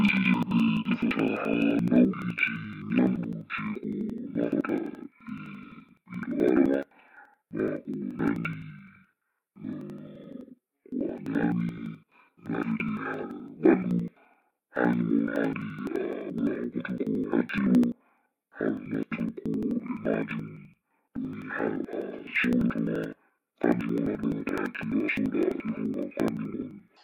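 Interleaved audio read as planar runs throughout this speech. Each 85 ms block, which fits a 4096-sample buffer, has its alternating left-right samples split into halves played side by side, so the sound drops an octave, doubles, and chops at 11.7 Hz.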